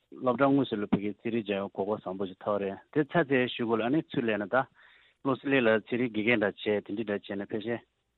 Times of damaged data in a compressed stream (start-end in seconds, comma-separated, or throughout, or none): none